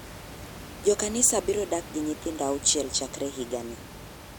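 No technical faults are audible.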